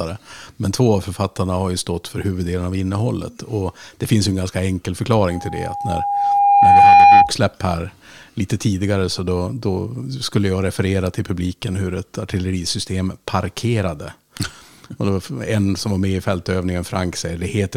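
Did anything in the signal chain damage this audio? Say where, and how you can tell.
Yes. Loudspeaker feedback squeal sits in the analogue acoustic path, where the microphone hears the loudspeaker it feeds. From 5.30 s to 7.34 s an 808 Hz tone rises out of the speech, swelling over roughly a second and a half until it stands about 15 dB above the signal. At that frequency the mic-to-speaker loop gain passed one, so the tone fed on itself and grew until it ended at 7.34 s.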